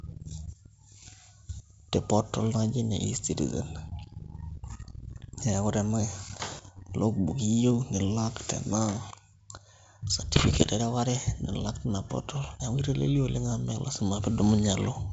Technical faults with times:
10.34-10.67 bit errors on an ADPCM link

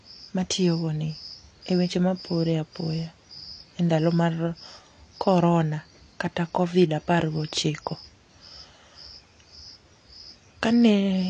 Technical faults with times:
0.00-11.29 AAC compression

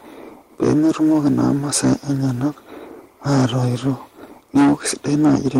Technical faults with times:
0.00-5.59 hard clipping

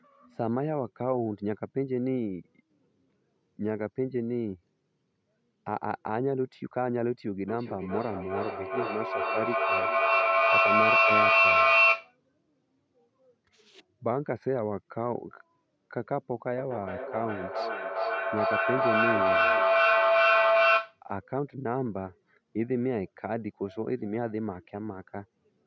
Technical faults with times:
7.48-12.17 feedback echo between two devices
16.58-21.03 feedback howl

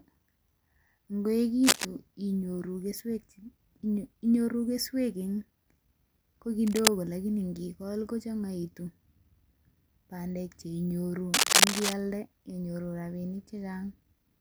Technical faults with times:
1.63-1.85 cable scratch noise
6.67-6.89 cable scratch noise
11.34-11.94 cable scratch noise

